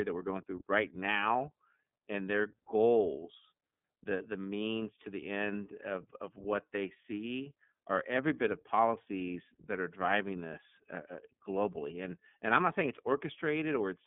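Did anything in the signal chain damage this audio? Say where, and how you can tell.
Yes. The damage happens at the codec stage: the speech has passed through the iLBC codec for its whole length. Everything above about 3.7 kHz is gone, and the line band sits at roughly 150 Hz to 3.5 kHz. Because each frame's excitation is coded on its own, the voice sounds plainly rough and synthetic. On a spectrogram there is a hard ceiling near 3.7 kHz and smeared harmonics that pattern at 30 ms frame boundaries, which fits the 13.33 kbps mode.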